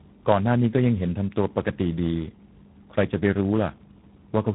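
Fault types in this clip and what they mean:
tandem speech coding: The speech went through several low-rate speech coders in a row. Each one re-encoded the already damaged output of the one before, so the errors pile up. Across the whole clip the speech sounds rough, muffled and warbly. Nothing is heard above 3.8 kHz, which removes the top of the sound. The sound fits three coding stages in sequence, such as G.726, then G.729A, then G.726 again, joined by plain telephone links.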